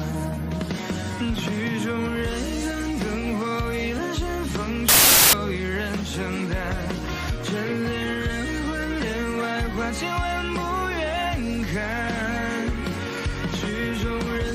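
Wrong sample width runs from 4.89 to 5.33 s. The data were stored as packed three-byte samples but read back four bytes at a time, which fits packed 24-bit integers read as 32-bit. Each value straddles neighbouring samples, so most are built from mismatched bytes. The passage turns into loud, harsh noise with the original sound faintly buried in it, playing 1.33 times too fast and correspondingly higher in pitch.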